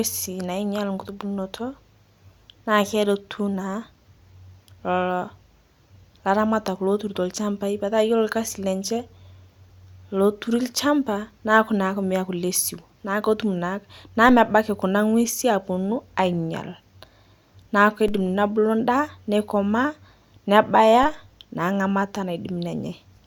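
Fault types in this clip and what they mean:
DC step: the waveform's zero line suddenly shifts by about -21 dBFS, as if an offset were switched into the signal path, while the speech carries on unchanged. It jumps at 14.29 s, holds, and steps back at 18.08 s, then jumps again at 21.03 s and holds to the end. Each jump is a low thump. On a waveform the trace sits visibly off-centre during those spans. A spectrogram shows a brief broadband, bass-heavy mark at each step.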